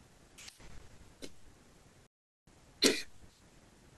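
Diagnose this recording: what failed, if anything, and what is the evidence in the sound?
The playback stage stalled here. At 2.07 s the speech cuts to silence mid-flow for about 0.41 s, picking up again at 2.47 s. That's a playback stall, most likely the player starving for data or its thread getting blocked until it caught up.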